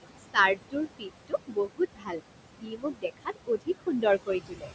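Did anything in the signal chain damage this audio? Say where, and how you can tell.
Yes. Noise suppressor artifacts run through the whole clip at the call-processing stage. The room noise sits only about 10 dB below the speech, and the suppressor pulls it down by about 22 dB wherever it judges a band to be steady noise, frame by frame. Between phrases the background drops away and then climbs back under the speech.

Speech cut by the noise suppressor, in the same processing stage, shows up at 0.55–1.11 s, 1.28–2.22 s and 2.61–4.72 s. Because the speech barely clears the background, the suppressor mistakes quieter speech energy for noise and turns it down with everything else, by about 21 to 22 dB at worst. Soft consonants and trailing endings sound swallowed, roughly a fifth of a second in the first span, most of a second in the second, and about a second in the last.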